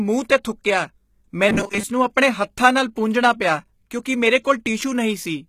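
HE-AAC compression runs through the whole recording, most likely HE-AAC v2 at a low bitrate around 20 kbps. The upper spectrum is rebuilt from copied lower bands rather than coded, so sibilants sound gritty and metallic.

Robotic sound from repeated short buffers appears from 1.49 to 1.83 s, just before "ਨੂੰ ਆਪਣੇ ਹੱਥਾਂ ਨਾਲ". Most of that stretch is repeated audio rather than fresh signal, likely from buffer starvation. The repeats impose a rigid 200 Hz metallic buzz, which fits a 5 ms buffer.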